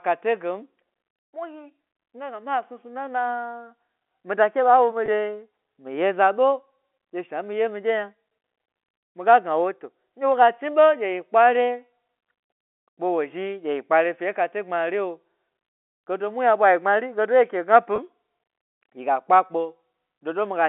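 It's a speech recording, and there's packet loss with pitch repetition in two spots, from 5.06 to 5.08 s and from 17.96 to 17.98 s. Each is a brief held, slightly buzzy blip where the receiver looped the last pitch period to cover a gap of about 20 ms, which fits a single lost packet. The band-limited telephone sound from the G.711 coding comes through as you'd expect.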